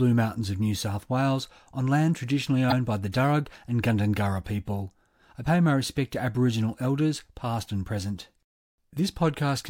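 At 5.42 to 5.47 s the speech is interrupted by a short burst of damaged data in a compressed stream. A stretch of the encoded bitstream arrives corrupted, so the decoder cannot parse those frames correctly, loses frame sync and scans forward for the next valid header before resuming. The result is a brief glitch lasting roughly 40 ms.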